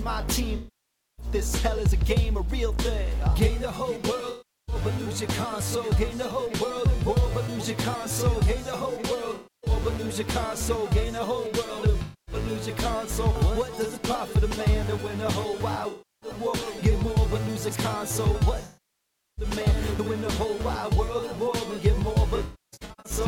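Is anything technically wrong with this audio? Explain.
Yes. There is AAC frame loss with concealment at 0.56–1.26 s, 4.29–4.75 s, 9.35–9.70 s, 12.01–12.35 s, 15.90–16.30 s, 18.65–19.45 s, and 22.36–23.12 s. In the last stretch the losses are scattered, with the longest run around 0.3 s. When frames go missing, the decoder rebuilds them from the last good spectrum, so each gap turns into a smeared, noisy or phasey patch. The longer gaps, of about 0.6 and 0.7 s, sag toward quiet and recover. The gaps are smeared rather than hard-cut to silence, which separates this from a plain dropout. The loss steps fit AAC frames of about 21 ms.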